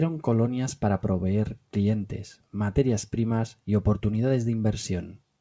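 Nothing's wrong with this speech clip; it came over a call link, and the sound stops at about 8 kHz, as you'd expect from a wideband call codec like G.722.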